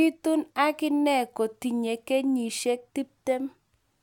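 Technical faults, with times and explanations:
No technical faults detected anywhere in the speech recording.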